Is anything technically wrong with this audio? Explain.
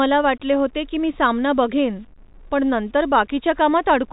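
Yes. Throughout the speech there is low bit depth without dither. The likely cause is rounding down to about 8 bits by truncation with no dither, so the error tracks the signal. Quiet stretches turn gritty and grainy, with distortion roughly 40 dB below the speech, on top of the telephone band that stops near 3.8 kHz.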